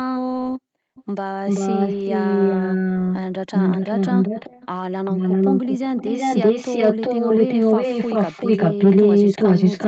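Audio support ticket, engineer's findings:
Echo leak: delayed copy of the speech trailing itself by 390 ms, likely residual echo from a loudspeaker end whose canceller failed to suppress the returned signal. A faint scrap at 0.94–1.04 s, about 20 dB under the direct speech. Then stretches at 1.46–3.18 s, 3.53–4.67 s and 5.05–5.8 s, about 5 dB above it, and from 5.96 s to the end, about 10 dB above it. On the spectrogram, harmonic patterns repeat 390 ms later. On the waveform, envelopes are doubled and smeared.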